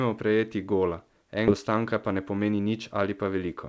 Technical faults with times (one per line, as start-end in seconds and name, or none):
1.48-1.50 skip ahead
1.69-3.55 jitter buffer speed-up